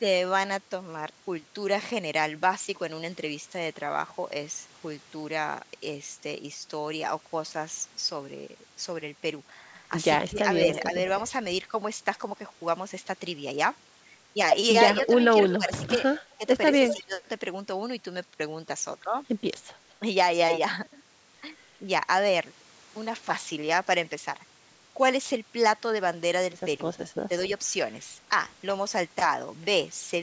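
Between 10.28 and 10.93 s the speech dips by as much as about 20 dB in short pieces adding up to roughly a fifth of a second, and from 15.08 to 17.2 s it dips again, by up to about 15 dB, across roughly half a second in total. This is speech suppressed in double talk, likely because the echo canceller could not separate the near talker from the far side's loudspeaker echo and turned both down. The waveform shows sudden notches in the envelope, and the spectrogram shows the energy thinning in those slices.

Overlapping that second stretch, from 15.5 to 17.04 s, is an echo leak: a copy of the speech delayed by 212 ms and about 10 dB below it, likely loudspeaker pickup the echo canceller failed to remove. On a spectrogram it appears as a duplicate of the speech patterns shifted right by about 0.2 s, all of it capped at 8 kHz like the rest of the call audio.

A second, far weaker echo leak appears at 19.90–19.94 s, a brief scrap about 40 dB down with a 214 ms delay, likely more loudspeaker pickup the echo canceller missed, visible only as a faint smear.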